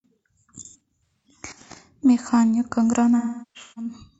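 From 0.65 to 1.27 s, the speech breaks up from AAC frame loss with concealment. About 0.34 s of audio is missing in short gaps, the longest around a tenth of a second. The decoder fills each gap from the last good spectrum, so these patches sound smeared and noisy. From 3.18 to 4.09 s it happens again, worse. About 0.6 s is lost, including one run near 0.4 s. There the concealed sound decays toward silence, then fades back in.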